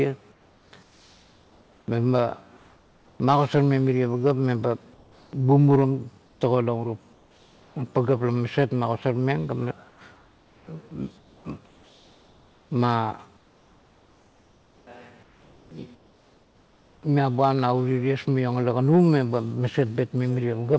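Speech with comfort noise in place of the background in eight spans: 0.32–1.88, 2.57–3.20, 4.94–5.33, 6.26–6.41, 7.13–7.76, 9.89–10.67, 11.18–12.71 and 13.37–17.03 s. These gaps fall just before and just after "magosarmeng mirie pagap meba", with the last gap ending at "miabuam na". The likely cause is discontinuous transmission, with the receiver synthesising a steady, featureless noise, about 3–4 dB quieter, in place of the real room sound. On a spectrogram these spans show as smooth, uniform noise bands without the background's fine texture, and the waveform shows a flat, even floor that steps down. Throughout, the call path leaves nothing above 8 kHz, which fits a wideband codec such as G.722.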